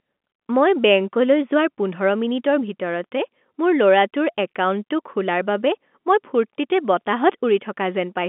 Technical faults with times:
none

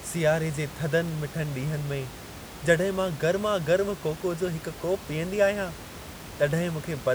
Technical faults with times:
none

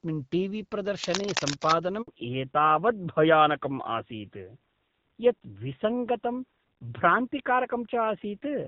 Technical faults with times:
1.03-1.72 cable scratch noise
2.02-2.08 handover gap
2.08-8.67 fallback to narrowband

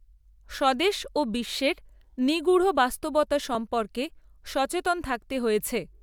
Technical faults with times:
0.54-5.05 clock drift buffer slips

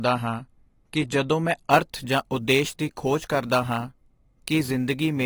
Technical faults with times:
0.00-5.26 AAC compression
1.70-5.26 sample clock jitter

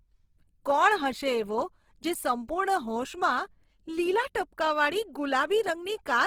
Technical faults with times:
0.00-6.26 Opus compression

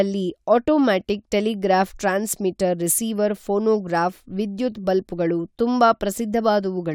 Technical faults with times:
none

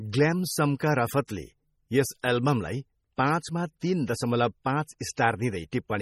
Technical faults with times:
0.00-6.01 MP3 compression
3.80-3.82 pre-echo
4.99-5.18 pre-echo

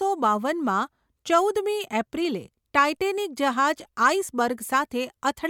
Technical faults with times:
none

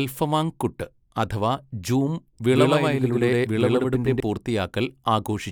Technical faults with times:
2.50-4.20 doubled audio track

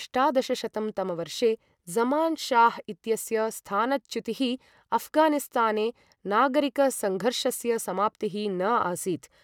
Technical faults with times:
none

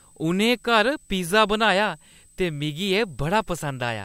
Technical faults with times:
0.00-4.04 switching supply whistle

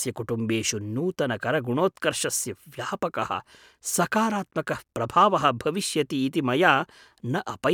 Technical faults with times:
none

